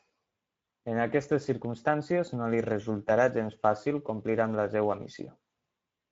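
From start to finish the speech carries Speex codec damage: a plainly hoarse, noisy graininess from the CELP coder's thin excitation, consistent with a mid-rate setting around 17 kbps. Nothing is present above 7.7 kHz, leaving a band-limited, slightly dull top.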